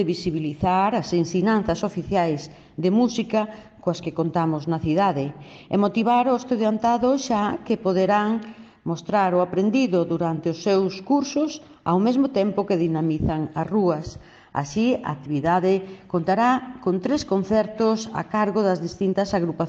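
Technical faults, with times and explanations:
13.01 to 15.01 s, adaptive stream at a lower bitrate: for two seconds the audio switches abruptly to a lower-quality encoding and then returns, with no gap at either boundary. The character of the artefacts points to AAC-LC dropping from around 96 kbit/s to around 32 kbit/s, which is what an adaptive player does when the connection slows and it fetches a cheaper rendition. With far fewer bits per frame, the encoder discards more detail, so codec artefacts rise audibly through that stretch before full quality resumes.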